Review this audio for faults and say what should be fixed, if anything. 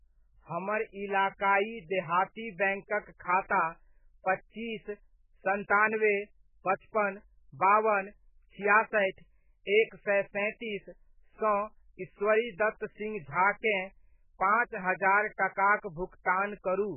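The speech sounds watery and swirly throughout, with everything above 3 kHz gone, so it's dull and muffled. That's likely heavy MP3 compression, at something like 8 kbps: too few bits, so the encoder chops the treble and lets weak frequency lines flicker between frames. To prevent it, encode at a much higher bitrate or keep a lossless copy.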